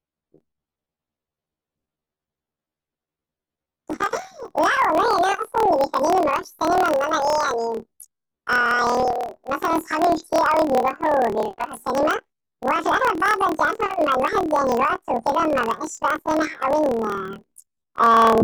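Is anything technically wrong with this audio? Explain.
Yes. Throughout the speech, the sound is an octave high with a rough buzzing flutter at about 38.3 Hz. This is planar audio read as interleaved: each 26.12 ms block of left-then-right samples is played as two double-speed halves, one per channel.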